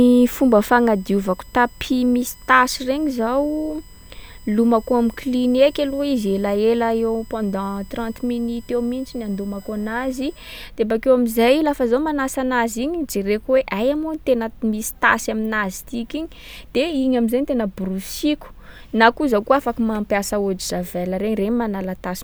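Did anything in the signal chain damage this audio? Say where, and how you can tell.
Yes. From 0.0 to 10.54 s a fixed-pitch whine sits under the speech, built on 1 kHz with its strongest component at 8 kHz, roughly 30 dB below the signal. This is USB whine in the analogue wiring: the bus's 1 ms frame and 125 microsecond microframe current draw leaks through power or ground.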